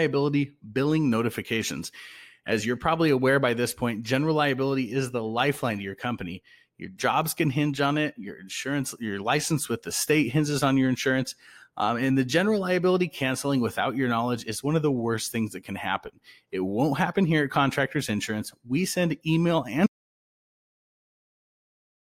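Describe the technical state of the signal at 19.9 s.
At 19.9 s the signal is in an audio dropout to silence, which begins at 19.87 s and runs to the end of the clip at 22.1 s. The speech cuts off mid-flow and is replaced by silence: no room tone, nothing. The input was likely lost upstream, through a disconnected device, a failed link or an unintended mute, while the recorder kept writing silence. Whatever followed is unrecoverable.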